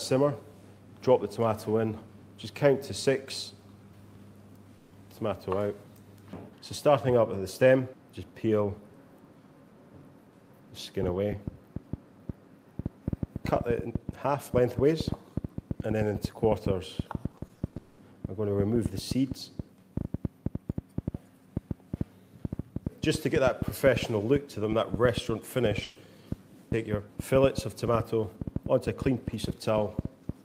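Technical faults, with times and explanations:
4.77–4.93 s and 25.83–25.97 s: burst of packet loss. At each point a short run of consecutive audio was lost or arrived too late, and the receiver concealed it by extending the last sound it had while fading it down. This fill covers about 140 ms in the first gap and 120 ms in the second. Neither gap is left silent. Playback then resumes with that stretch of the original audio missing, so the sound skips forward.
17.31–17.99 s: repeated packet loss (robotic sound). Over this 0.68 s span, eight separate gaps follow one another closely, the longest lasting 200 ms. Each is patched by repeating and decaying the preceding sound, and the patches add up to 360 ms, slightly more than half the span. Before the audio can settle between these repeated fills, the next gap arrives, giving a choppy sound with pieces of the original missing.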